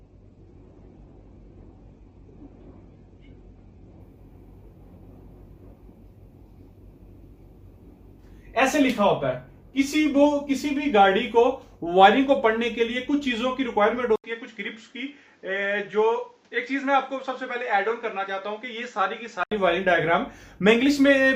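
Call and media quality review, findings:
Adaptive stream starting at a low bitrate, 0.00–4.00 s: the player opens on a low tier, consistent with Opus near 12 kbit/s, then steps up to about 64 kbit/s. Until 4.0 s nothing above 4.7 kHz and stronger codec artefacts; quality jumps without a gap.

Input switched to a poorer device, likely cause, 14.16–19.51 s: an 80 ms silence at the switch, then band limited to 7.8 kHz, level down about 5 dB, new noise floor roughly 35 dB below signal. Sound turns duller until 19.51 s.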